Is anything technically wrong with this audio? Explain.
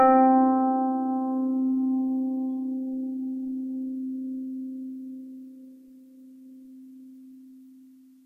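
Yes. From 3.91 to 4.03 s the music has DAB burbling. Weak reception let bit errors slip past error correction into the MP2 data, and an error rate of roughly 0.07 percent is enough for that. The errors hit about five frames. This produces short blips of noise in single sub-bands.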